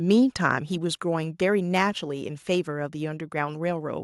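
From 0.10 to 0.13 s, the loudest peaks sound harsh and crackly, about 1 dB over. This is likely microphone overload, clipping a small share of samples.

At 1.02 s and again at 2.04 s, voice and background drop suddenly by about 3 dB. The likely cause is microphone volume stepped down by the software.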